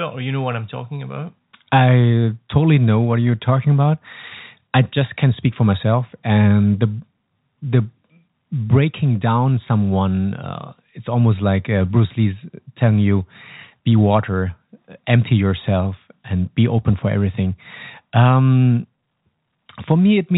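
No technical faults occur at any point in the speech, which carries the narrow sound of ordinary G.711 telephone coding.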